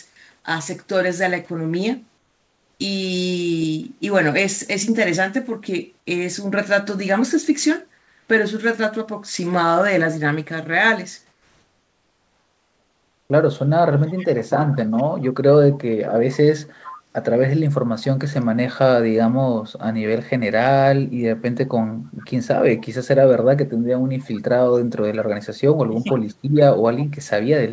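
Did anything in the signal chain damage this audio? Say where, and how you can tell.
Yes. The call-processing stage, likely discontinuous transmission, stopped carrying the real background during pauses, and the receiver filled those gaps with comfort noise in place of the background. It happens from 2.18 to 2.80 s, 7.98 to 8.28 s and 11.32 to 13.30 s. The background, already about 40 to 46 dB below the loudest speech, turns into a smooth, featureless hiss about 3 to 4 dB quieter, then the real room tone returns when the speech resumes.

An echo leak points to the far end's echo canceller failing to remove its loudspeaker signal, likely on a speakerphone, so that signal was sent back down the line. A faint copy of the speech, trailing by about 0.44 s, sits well below the direct sound from 14.07 to 15.78 s, 16.86 to 16.99 s, 21.67 to 22.86 s and 24.22 to 27.05 s. The fixed lag distinguishes it from room reverberation.

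Speech suppressed in double talk appears inside the last echo stretch, from 25.88 to 26.29 s. The echo canceller, likely unable to separate the local talker from the returning echo while both were active, pulled the level down. The speech ducks by roughly 25 dB at its deepest, with the affected parts totalling about a fifth of a second. It is a gain decision in the call processing, not a network dropout.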